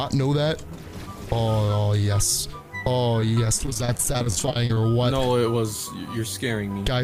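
The audio turns choppy and robotic from 3.20 to 4.77 s through repeated packet loss (robotic sound): dozens of holes up to 24 ms, about a quarter of the span patched by repeating prior sound. Spectrogram shows striped, smeared frames; waveform looks chopped.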